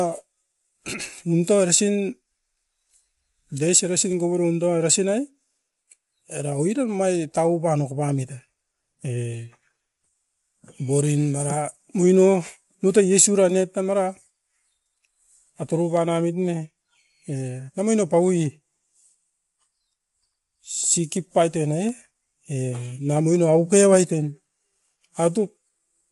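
A speech recording runs throughout with low-delay AAC compression, most likely AAC-ELD, and the damage is plainly audible: the voice sounds rough and grainy, with noise filling the gaps between harmonics. This damage fits a bitrate around 32 kbps. On a spectrogram, harmonic stripes look smeared and speckled, and all energy stops at a hard ceiling of 11.6 kHz, leaving an empty band above it.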